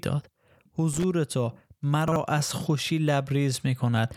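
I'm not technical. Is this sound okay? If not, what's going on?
No. From 0.93 to 1.04 s there is loose connector crackle: a short, irregular burst of scratchy crackling. It sounds like a worn or dirty plug contact that keeps making and breaking the connection for about a tenth of a second, chopping the speech.

From 2.08 to 2.16 s the chunks are out of order. One 40 ms slice of speech plays one slot late, after the slice that should follow it. Nothing is missing, but the brief swap sounds jumbled, and there are three abrupt joins where the pieces meet.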